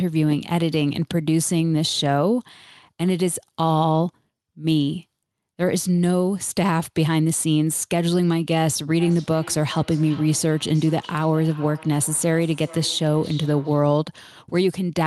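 From 8.99 s to 13.99 s the speech shows feedback echo between two devices: a second device on the same call replays this microphone's signal, which is picked up again outside the echo canceller's reach. Repeats arrive around 400 ms apart, thinner and ringing, peaking about 20 dB below the speech.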